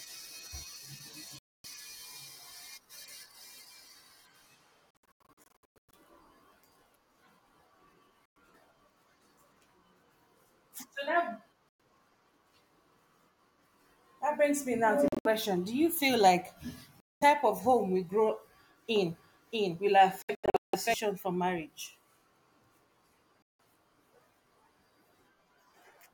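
Hard-edged silent gaps cut into the speech at 1.39–1.66 s, 4.92–5.95 s, 8.26–8.37 s, 11.69–11.81 s, 15.08–15.27 s (right after "brings me now to"), 17.00–17.23 s (between "you feel like" and "of home we grow"), 20.23–20.75 s (just before "for marriage") and 23.43–23.60 s. At 4.92–5.95 s the gaps are scattered across about a second, the longest about 0.11 s, and at 20.23–20.75 s they are spread over about half a second, the longest about 0.17 s. Each time the speech picks up further on, as if it had kept playing underneath. This is a Bluetooth dropout, likely from audio packets arriving too late for the headphones and being discarded. The gap lengths fit losses in steps of roughly 21 ms per packet.

From 18.96 to 20.94 s a second copy of the speech runs alongside the first, trailing by roughly 0.7 s at about the same loudness. It is full-band with no reverberant tail, so it reads as a stacked echo rather than room sound. 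It switches on and off abruptly at those edges. That is a doubled audio track, likely the same signal captured again through a slower path and mixed back in.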